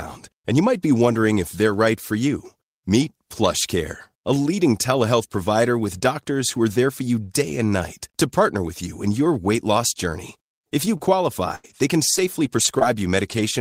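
Right after "your weight loss journey", from 10.51 to 13.39 s, you get scattered short gaps: about seven dropouts, none much longer than 70 ms. The receiver papers over each by stretching the last bit of sound, so the speech stays clear but picks up little ticks and smeary hiccups.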